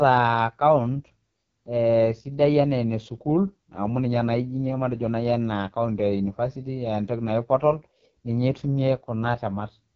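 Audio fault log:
throughout, AMR wideband (HD Voice) codec: the speech has been squeezed through AMR-WB at what sounds like its bottom rate, consistent with the 6.6 kbit/s mode. At that rate the pulse-excited vocal tract model has too few bits to track the voice, so the speech comes out rough and raspy, with a buzzy, gritty edge. Everything stops near 7.1 kHz, and the top band is filled with synthetic noise rather than real detail.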